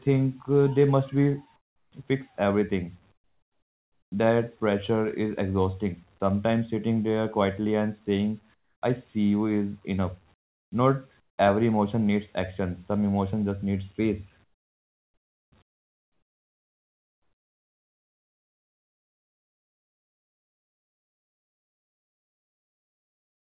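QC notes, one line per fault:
1.56–1.92 s, 3.12–4.12 s, 8.54–8.82 s, 10.34–10.72 s, 11.20–11.38 s, 14.44–15.52 s, 15.62 s to end: comfort noise in place of the background. In each speech pause the real background drops out and is replaced by steady, featureless hiss, about 15 to 30 dB quieter, likely because the sender stopped transmitting during silence and the receiver generated filler noise.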